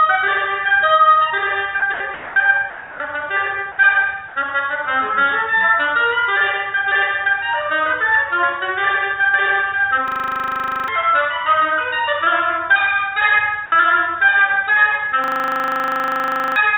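Five brief dropouts early on, at 1.80 to 1.82 s, 1.94 to 2.00 s, 2.14 to 2.36 s, 2.70 to 3.00 s and 4.28 to 4.36 s, where the audio gives way to flat, steady noise. This is likely sound dropped by the voice detector, with comfort noise filling the gaps. Unlike packet loss, these gaps contain no clicks or smeared concealment, only a clean swap to even hiss that ends when the sound resumes. Later, a system hang loop replays one 40 ms piece of audio at 25 Hz, from 10.08 to 10.88 s and again from 15.24 to 16.56 s, costing roughly 0.7 s and 1.5 s of sound. The exact repetition produces a rigid, evenly pulsed buzz rather than stutter-free silence or a varying glitch. Throughout, the band stops at 4 kHz, which fits a G.711 A-law call path.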